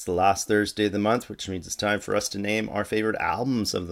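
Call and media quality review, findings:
No audible faults found in this speech recording.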